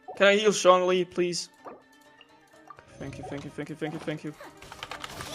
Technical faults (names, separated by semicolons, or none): clock drift between sender and receiver; repeated timing corrections